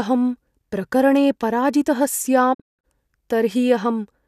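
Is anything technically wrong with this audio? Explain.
Yes. From 2.53 to 2.85 s the speech drops out in a cluster of short holes, each entered with a quick fade of about 20 ms. The longest silent stretch lasts 168 ms, and about 240 ms of sound goes missing across a span of 288 ms. This is a digital broadcast dropout: the receiver stopped getting frames it could decode and muted until valid ones resumed, so the programme carries on with that audio lost. The gaps fit roughly ten lost frames.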